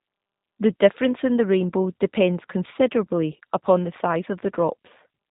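G.729 codec damage runs through the whole speech clip. Nothing above 3.8 kHz survives, and pulse-based resynthesis makes voices rough and synthetic, fitting 8 kbit/s coding.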